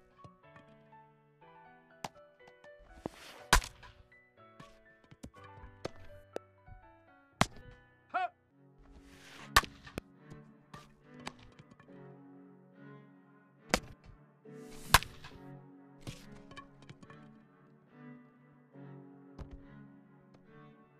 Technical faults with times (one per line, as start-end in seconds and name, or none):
3.06-3.08 loud pop
6.36-6.38 loud pop
9.98-10.00 loud pop